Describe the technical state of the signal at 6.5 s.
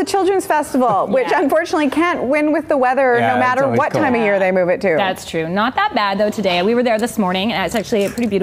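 At 6.5 s the signal is intact, with no audible dropout, distortion, glitch or other fault at that moment.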